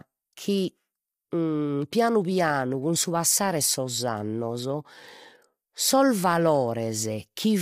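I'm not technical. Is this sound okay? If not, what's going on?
No. Low-delay AAC compression runs through the whole clip, and the speech sounds rough and grainy, with nothing above about 15.8 kHz. The likely cause is the quick-response encoding used in video calls, which handles voices coarsely.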